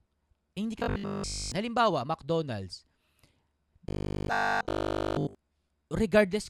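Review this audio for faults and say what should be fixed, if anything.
Robotic sound from repeated short buffers hits the speech from 0.80 to 1.52 s and 3.89 to 5.35 s: a rigid 50 Hz buzz, likely one 20 ms chunk looping while essentially all new audio gets skipped. Keep the input buffer fed, or add proper packet-loss concealment, so stalls don't loop stale audio.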